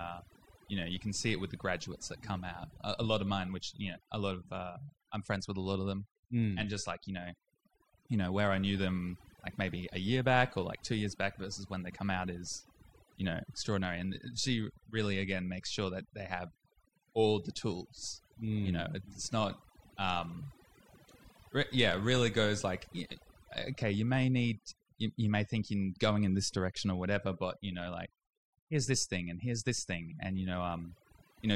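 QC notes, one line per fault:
Throughout: overdone noise removal. The background between phrases drops and breaks up into twinkling specks, and the speech has its quieter detail hollowed out. A noise reduction stage has been pushed far too hard on a noisy recording, cutting individual frequency bands deep or off whenever they sit close to its noise estimate. The low-level parts of the voice fall into that range and are stripped away along with the noise.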